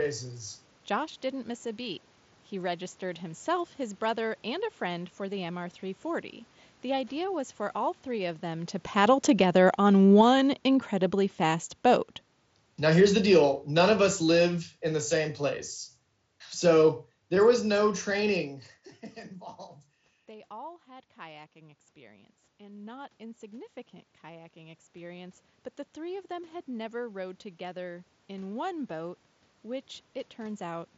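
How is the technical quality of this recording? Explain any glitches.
The level is the main problem: the automatic gain control pumps twice, so the speech and the room noise under it swell and sink together.

Right after "three of them to", from 8.84 to 18.49 s, automatic gain falls. The talker comes closer, the AGC reads it as too loud and slowly pulls down about 16 dB.

From 20.26 to 29.18 s, automatic gain rises. The talker backs off, the input drops about 16 dB, and the AGC gradually brings it back up by about 11 dB, lifting the background with it.

The sound stops around 7.7 kHz, which fits a wideband Bluetooth mSBC headset link.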